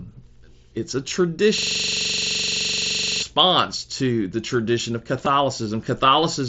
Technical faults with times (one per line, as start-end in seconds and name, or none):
1.58-3.22 system hang loop
5.25 concealed Bluetooth headset packet loss